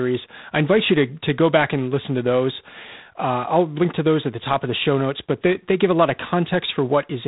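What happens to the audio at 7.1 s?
At 7.1 s the speech carries G.726 ADPCM damage, present throughout the clip: a harsh, rasping hiss that rises and falls with the speech level, which fits 24 kbit/s coding. That is coarse quantisation of the difference between each sample and an adaptive prediction. A spectrogram shows a hard ceiling at 3.8 kHz and grainy noise filling the band under the speech.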